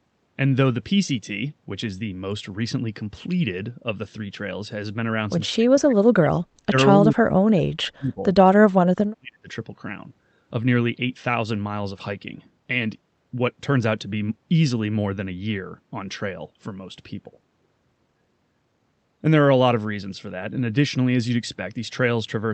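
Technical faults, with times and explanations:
5.53–6.35 s, 6.67–6.75 s, 6.91–8.24 s and 8.62–9.49 s, speech suppressed in double talk: the speech sinks by up to about 40 dB in dips. This is likely an echo canceller unable to separate this side's talk from the far-end echo during simultaneous talk and turning both down.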